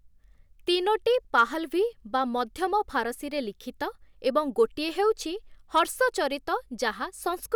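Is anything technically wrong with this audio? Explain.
Yes. The speech has two brief bursts of hard clipping. The first runs from 1.38 to 1.41 s and the second from 5.77 to 5.79 s. Each lasts only a few hundredths of a second. At those moments the signal peaks exceed what the recording chain can pass by about 2 dB, so their tops are sliced flat. Those flat edges generate high harmonics. The result is a short crackle riding on the loudest syllables.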